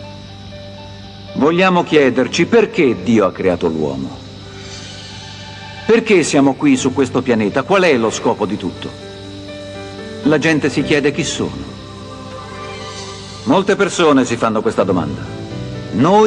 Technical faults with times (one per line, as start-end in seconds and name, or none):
none